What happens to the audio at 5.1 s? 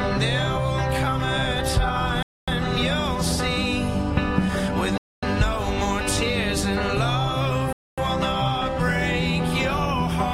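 A gap between chunks: 250 ms of silence from 4.98 to 5.23 s, inserted at a 2.5 s chunk join, heard as an abrupt hole. The waveform drops to a flat line and the spectrogram shows a blank column.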